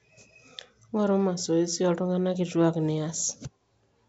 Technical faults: none

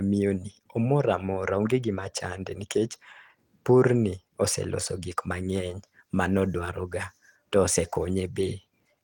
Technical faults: none

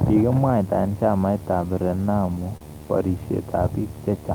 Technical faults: video or display buzz; repeated stalls (stutter)

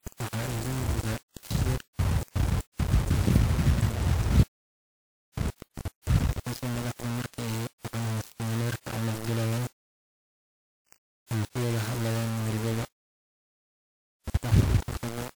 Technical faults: low bit depth without dither

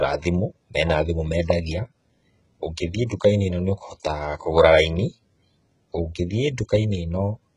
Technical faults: HE-AAC compression

